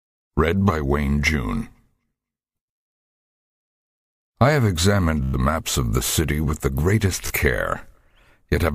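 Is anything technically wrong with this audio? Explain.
Yes. Bluetooth stutter occurs at 5.24 to 5.36 s and again at 7.27 to 7.33 s. Packets arrived late or not at all, so the receiver replayed its last short slice. This gives a brief machine-gun buzz. About 0.11 s and 0.03 s of sound are skipped before playback resumes.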